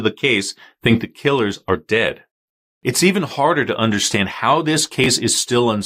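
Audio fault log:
5.04–5.06 s, chunks out of order: just after "harder to understand how", one 10 ms chunk plays a chunk late, swapping places with its neighbour. No audio is lost, but the reversed order and the three hard joins it creates produce a brief jumbled blip.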